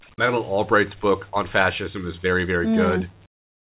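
From 3.26 s to the end at 3.69 s, the real background drops out and a flat, featureless hiss takes over, about 26 dB quieter. That's comfort noise in place of the background, likely the sender's discontinuous transmission pausing, with the receiver filling the gap through the call path's 4 kHz-limited band.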